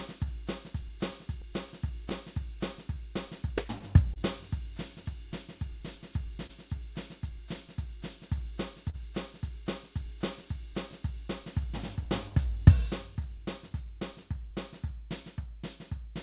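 A piece of music, carried over a call link that cuts everything above 4 kHz, with the dull, band-limited sound that fits G.711 mu-law coding. The main fault is clock drift between sender and receiver. The sender's clock runs about 3 percent slow. The receiver's jitter buffer keeps draining as a result. The problem runs through the whole clip.

To keep up, the receiver makes repeated timing corrections from 0.17 s to 15.85 s. It repeats short slices of audio, always stretching, never cutting. Playback runs at about 98 percent speed. Roughly 300 ms is added in total. The edits come at uneven intervals. At most they are heard as small stumbles and a slightly wavering tempo in the music.

There are also scattered short gaps. Between 1.11 s and 8.96 s, about ten brief holes occur, where packets were lost or arrived late. Each was patched by continuing the last sound. They add up to roughly 150 ms, and the longest is around 40 ms. 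A second cluster, of about five, falls between 10.92 s and 14.77 s. These are shorter, none over about 15 ms. All of them are brief ticks and smears.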